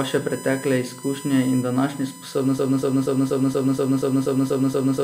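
It's a speech clip with a USB whine running the whole way through: a fixed-pitch whine built on 1 kHz, loudest at its 8 kHz multiple, sitting roughly 20 dB under the speech. That's the USB bus's 1 ms frame and 125 microsecond microframe current draw leaking in through power or ground. Then at 2.58 s, right after "pretekle izkušnje in današnje", it drops into a broken-record loop. A 0.24 s fragment repeats back to back ten times until the end at 5 s, and whatever should have followed is gone. The likely cause is a stalled player, encoder or stream that kept resending its last buffered chunk.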